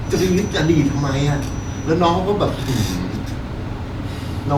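A loudspeaker-to-microphone loop likely sits just short of runaway from 0 to 2.0 s, leaving a thin feedback whistle near 5.9 kHz well beneath the speech.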